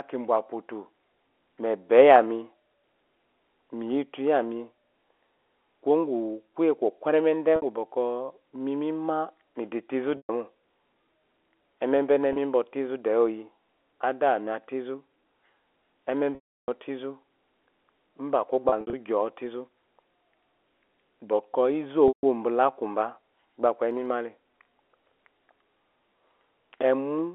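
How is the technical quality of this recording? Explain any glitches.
The recording has six audible glitches, all from packet loss with pitch repetition, heard through a narrow telephone band of roughly 300 Hz to 3.4 kHz from the G.711 coding. The gaps occur at 7.56 s (60 ms, right after "kuye kokweremede"), 10.17 s (120 ms), 12.33 s (30 ms, just before "ba ofaizu de oyi"), 16.35 s (330 ms), 18.69 s and 22.08 s (150 ms, just before "bela akuba"). At 18.69 s the loss totals 120 ms, scattered over 240 ms in runs of up to 60 ms.

Each time, a stretch of audio never arrived, and the receiver filled the hole by looping the last pitch period and fading it over about 50 ms. The 30 and 60 ms gaps sound like a briefly held, buzzy note. The 16.35 s gap outlasts the fade, sinks into silence and returns with a short cross-fade. The scattered loss at 18.69 s comes across as brief held, buzzy notes. 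All lost lengths are multiples of 30 ms, which fits 30 ms packets. A plain dropout would go dead or click, but here the gap carries a held tone.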